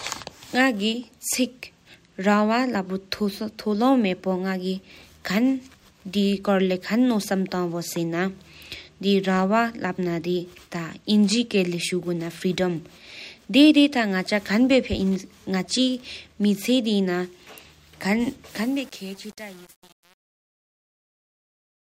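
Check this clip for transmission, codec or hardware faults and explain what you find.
One fault turns up, at the very end of the speech. From 18.50 s to the end, the fade-out turns gritty. This is truncation distortion on a fade: the fade stage keeps too few bits and adds no dither, which fits roughly 7-bit resolution, so the falling waveform collapses into coarse square steps.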